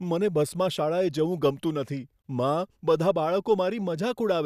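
At 2.22 s the speech drops out for about 24 ms, a brief hole with smeared edges, then resumes exactly where it stopped. This is a gap at a join of encoded pieces: separately encoded segments were spliced untrimmed, leaving encoder start delay and final-frame padding as silence.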